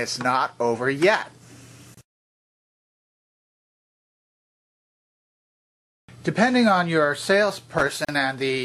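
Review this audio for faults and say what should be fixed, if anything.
Two gaps at a join of encoded pieces open at 1.94–1.97 s (29 ms) and 8.05–8.09 s (38 ms). Each separately encoded piece, apparently about 2 s long, kept its start-up delay and last-frame padding. Unlike a dropout, the sound resumes exactly where it stopped, with nothing lost. Trim encoder delay and padding before joining, or encode the material as one continuous stream.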